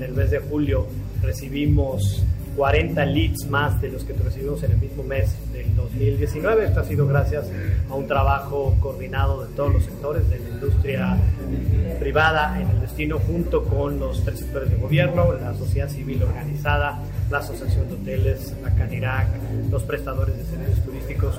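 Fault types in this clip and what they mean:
No fault types are present in this clip, so there is nothing to list or explain.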